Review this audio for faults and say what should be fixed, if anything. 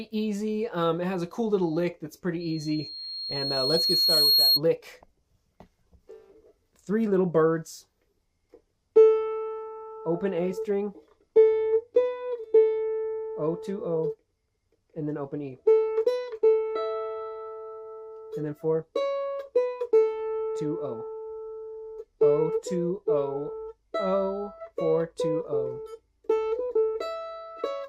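A piercing 4.3 kHz tone swells over roughly two seconds from 2.40 s to 4.61 s, rising above the sound: loudspeaker feedback squeal, where the microphone-to-loudspeaker loop gain exceeds one. Prevent it by lowering monitor gain, moving the microphone away from the loudspeaker, or notching 4.3 kHz.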